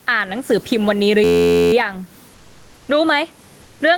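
Right through the clip there's gain pumping: the background swells up in the pauses and ducks by about 15 dB under each loud stretch of speech, so everything sounds squashed and level. The likely cause is mic gain set way too high with a fast limiter clamping down on it.

From 1.24 to 1.73 s you get a system hang loop. One 11.61 ms slice of audio repeats exactly, dozens of times, which comes out as a steady buzz at about 86.1 Hz. That fits a 512-sample buffer being cycled over and over while the machine froze.

Then there's comfort noise in place of the background, from 2.36 to 2.88 s and again from 3.64 to 3.80 s. The real room background drops out and a flat, featureless hiss stands in, about 2 dB and about 3 dB quieter respectively, likely from Opus DTX switching off transmission during the gaps. You can also hear the call codec rolling off the top end around 12 kHz.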